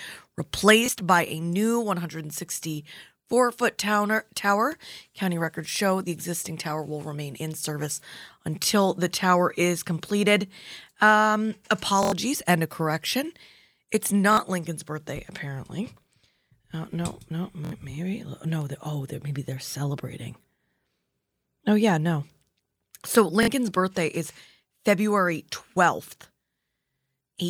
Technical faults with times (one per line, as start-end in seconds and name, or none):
0.86-0.88 repeated buffer
12.03-12.12 repeated buffer
14.33-14.37 repeated buffer
17.65-17.72 repeated buffer
23.43-23.48 repeated buffer